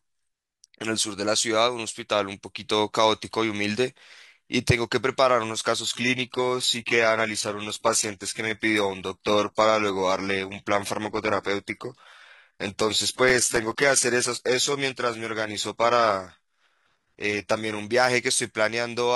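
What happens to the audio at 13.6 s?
At 13.6 s the speech is torn by a gritty burst of crackle, a processor overload crackle running from 13.24 s to 13.83 s. The processor fell behind and missed a few dozen audio deadlines in a row. Each miss drops in a tiny hard-edged gap of silence, and the spacing of those dropouts fits very short buffers of roughly a millisecond and a half. Strung together, they sound like tearing that stops once the load clears.

Underneath, the speech is already thinned, with nothing above 11.8 kHz. This is an adaptive stream at a lower bitrate, lasting from 5.81 s to 17.81 s. When the connection slowed, the stream switched without a gap to a much leaner encoding. The sound points to a move from AAC-LC at around 96 kbit/s down to HE-AAC at around 16 kbit/s, which removes the top end and rebuilds it artificially.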